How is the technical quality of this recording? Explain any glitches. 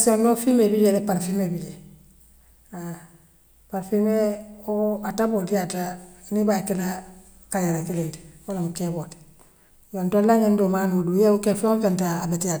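Nothing to report here: the speech runs along without any glitches at all.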